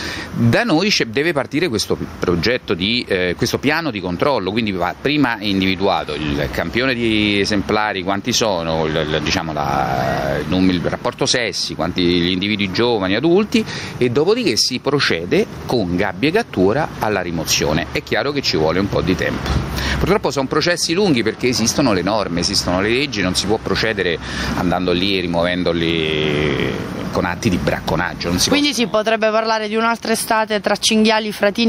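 Throughout, there is a level swing of around 20 dB, leaving the audio squashed and breathing. This gain pumping likely comes from input gain set far too high, with a fast limiter clamping down on each peak.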